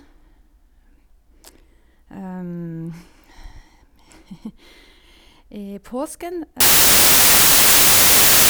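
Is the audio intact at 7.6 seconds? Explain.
No. At 7.6 seconds the speech is lost under samples built from the wrong bytes. This fault runs from 6.60 s to the end of the clip at 8.50 s. The reader combines each sample's bytes in the wrong way, perhaps shifted by one byte or in swapped order. The rapidly changing low bits then land in the most significant position. What you hear is loud, harsh broadband noise in place of the speech, close to white on the loud sounds.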